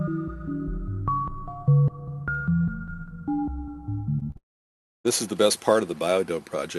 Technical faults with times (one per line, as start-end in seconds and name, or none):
4.19-4.37 short concealed packet loss
4.37-5.06 long network dropout